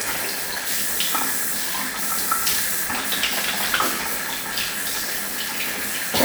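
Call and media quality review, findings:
Block size mismatch (padded), throughout. Steady buzz at 86.1 Hz; audio runs slow at 0.938x with pitch unchanged. Upstream stage writes short blocks; the downstream reader zero-fills the remainder, so each block carries a gap. This fits a 512-sample read block.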